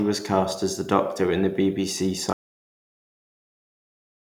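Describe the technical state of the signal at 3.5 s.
At 3.5 s the signal sits inside an audio dropout to silence that begins at 2.33 s and runs to the end of the clip. The speech cuts off abruptly into silence with no room tone, likely because the input was lost while silence kept being written. The waveform is a flat line, and the spectrogram is completely empty.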